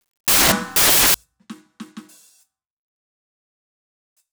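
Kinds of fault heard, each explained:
Samples built from the wrong bytes: the music opens with loud, harsh broadband noise from 0.0 to 1.14 s because each sample's bytes are assembled wrongly, through an offset, swapped order or misread alignment, so the fast-changing low bits dominate.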